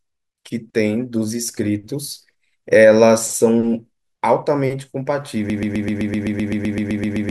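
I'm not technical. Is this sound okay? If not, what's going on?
No. From 5.5 s to the end, the speech turns into a broken-record loop: one tiny piece, about 0.13 s long, repeats exactly 14 times. Unlike an echo, it never fades or changes. Playback likely stalled, and the speech meant for that stretch is lost.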